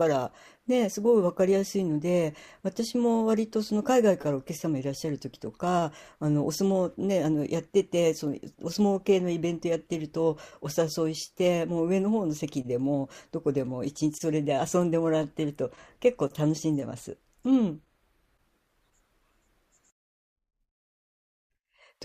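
Speech recording, and no technical faults are audible anywhere in it.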